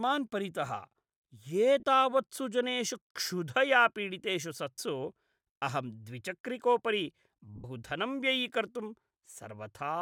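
At 1.80–1.83 s, 4.77 s and 7.56–7.64 s the speech briefly turns into a noisy smear. These are lost LE Audio frames: the decoder repeats the last spectrum with scrambled signs, and the 80 ms gap fades.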